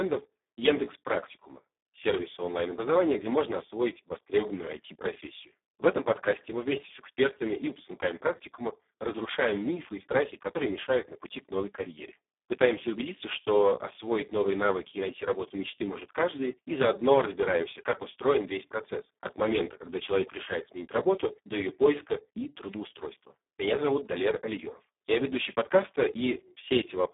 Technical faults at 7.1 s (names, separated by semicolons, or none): Speex codec